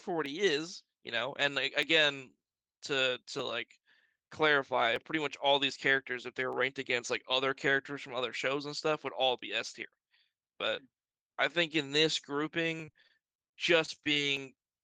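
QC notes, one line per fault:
0.26–14.37 s, clock drift buffer slips: A click recurs every 1.57 s while the speech runs, about ten of them across the clip, each the size of a few dozen samples being jumped or doubled. The likely cause is two devices running on independent clocks that disagree by a few hundred parts per million. The buffer between them slowly fills or drains until it must drop or repeat a block, so the ticks arrive at this steady rhythm.
12.85–14.18 s, repeated packet loss (robotic sound): The speech turns choppy and robotic, with eleven short holes in quick succession, the longest 27 ms. About 220 ms goes missing in all, and the patching covers roughly 17% of this span. Audio kept arriving late or not at all, so each gap was filled by extending the sound just before it. Another gap followed before the voice could settle, which gives the mechanical texture.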